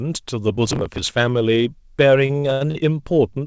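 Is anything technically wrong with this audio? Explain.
Yes, two things. From 0.50 to 1.09 s there's processor overload crackle: the CPU kept missing deadlines on roughly 10 ms buffers, a few dozen skipped over that stretch, so the speech gets a gritty, tearing crackle. From 2.26 to 2.77 s there are repeated stalls (stutter): packets arrived late five times, and the receiver stretched the last sound to fill about 227 ms, with the longest gap 82 ms. Nothing's lost, but it drags and hiccups. Underneath, the call path cuts everything above 8 kHz, which fits G.722.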